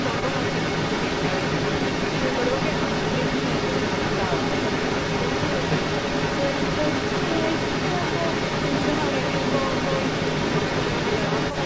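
Throughout, a second copy of the speech trails 211 ms behind, about 5 dB louder than the speech itself. This is an echo leak, likely a loudspeaker echo canceller letting pickup through.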